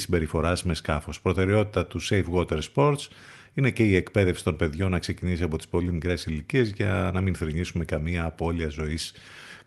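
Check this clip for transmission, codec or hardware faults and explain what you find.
No faults found; the speech shows only the ordinary coding character of an Opus call path, with the top end stopping at about 12 kHz, which fits a super-wideband setting around 32 kbps.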